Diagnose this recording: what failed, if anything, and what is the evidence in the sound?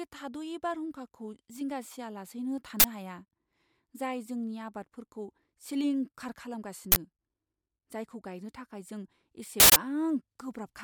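An uninitialised buffer at the driver or buffer stage: loud cracks at 2.80–2.84 s, after "थाद'यै बारहुंखाखौ जिंगा सियालासैनो", and at 6.92–6.96 s, and a burst of digital noise at 9.60–9.76 s, after "जायखौ गायनो थाखाय जों". Blocks played before being written replay stale memory as noise, not the silence of an underrun.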